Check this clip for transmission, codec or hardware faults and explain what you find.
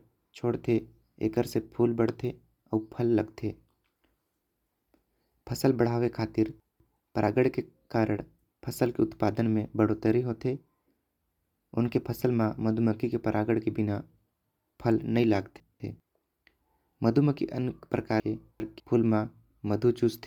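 Two faults are present: codec damage throughout the speech, and three brief jumbled passages.

Bluetooth LC3 compression, throughout: likely LC3 coding near 48 kbps in 10 ms frames, replacing upper-spectrum detail with noise and giving the speech a plainly audible breathy, grainy edge.

Chunks out of order, at 6.6 to 7.0 s, 15.6 to 16.0 s and 18.2 to 18.8 s: 200 ms segments play late, one, one and two chunks behind, so speech jumbles briefly at the hard joins.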